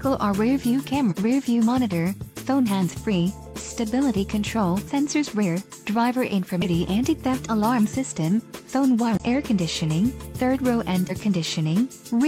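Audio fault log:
1.07–1.14, 4.83–4.89, 6.60–6.65, 9.15–9.21 and 11.06–11.12 s: damaged data in a compressed stream. Five brief glitches, each about 55–65 ms long, where corrupted bytes leave the decoder misreading frames and losing sync until it locks onto the next valid frame header.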